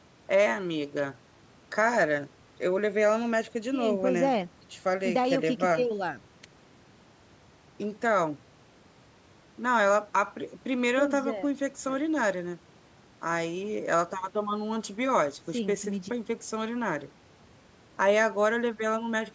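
Listening to this speech recording, nothing technical stood out at any point.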